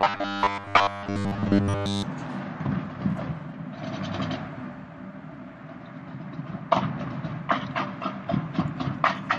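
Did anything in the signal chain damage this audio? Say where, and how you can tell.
Yes, at the driver or buffer stage. From 0.01 to 2.03 s a rigid, metallic 100 Hz buzz is heard, likely robotic sound from repeated short buffers: 10 ms chunks replay over most of the real audio. Its fixed pitch separates it from shifting codec warble.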